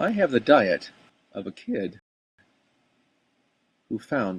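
At 1.10 s a sudden gain jump drops speech and background noise together by about 10 dB for the rest of the clip, likely an unramped gain change. Unlike a fade, it is instant. From 1.99 to 2.39 s a rebuffering stall cuts to silence, then resumes exactly where it stopped, adding about 0.39 s. Unlike a dropout, no speech is lost.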